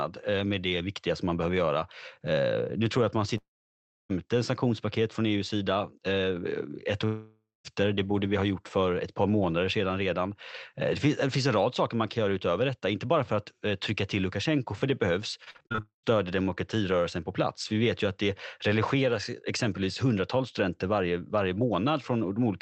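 At 3.37 s, just after "tror jag att man", the sound smears into a fading buzz and then drops to silence until 4.11 s, resuming at "sanktionspaket från" with about 0.72 s missing. A similar hole follows from 7.05 to 7.66 s, losing about 0.6 s, though here the fading tail fills most of the gap before a brief silence. Both are a long network dropout: audio likely stopped arriving, and the receiver stretched the last sound before giving up.

From 15.44 to 16.08 s, after "för det behövs", the audio turns choppy, broken by eight short holes, the longest 42 ms, with roughly 29% of the stretch patched over. This is repeated packet loss: packets kept going missing, and each gap was filled by extending the previous sound.

Inside that stretch, from 15.80 to 16.05 s, a third long network dropout swallows about 0.24 s, fading to a short silence before "demokratirörelsen på plats" returns. The whole call runs through Opus, which caps the audio at 8 kHz.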